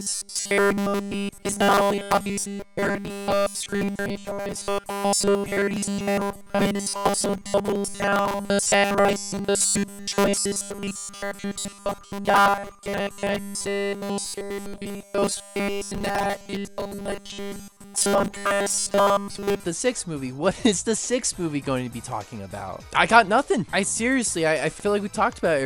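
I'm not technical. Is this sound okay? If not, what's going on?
No. From the very start to about 19.64 s, it has a robotic sound from repeated short buffers, a stiff metallic 200 Hz buzz throughout. It's likely because fresh audio arrived too slowly, so tiny 5 ms chunks got looped over and over while real audio was skipped.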